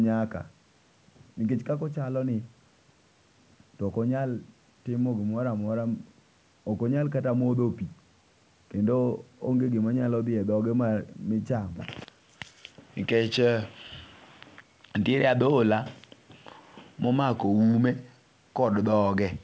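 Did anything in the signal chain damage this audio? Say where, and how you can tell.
No, nothing in the chain damages this speech; the empty band above 8 kHz is simply the normal bandwidth of the call microphone processing and the WebRTC call path, which fits a G.722 codec at 64 kbps.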